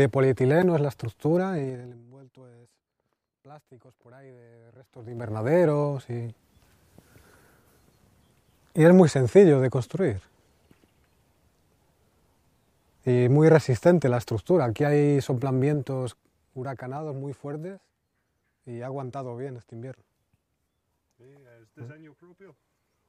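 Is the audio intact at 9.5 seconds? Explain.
Yes, the audio is intact at 9.5 seconds, with no fault audible at that moment.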